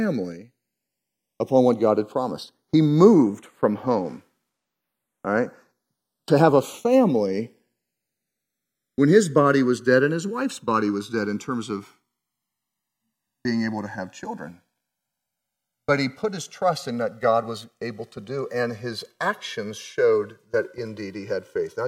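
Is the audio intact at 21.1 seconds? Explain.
No. At 21.1 seconds the speech is affected by channels drifting apart, a fault that runs through the whole clip. The two channels run on separate clocks that disagree by something like 100 ppm, so the gap between them keeps growing, reaching roughly 2 ms by the end. Heard summed, the comb notches glide slowly across the spectrum as slow flanging. Unlike a fixed channel offset, the coloration never settles, and unlike a flanger effect, it moves one way rather than sweeping back and forth.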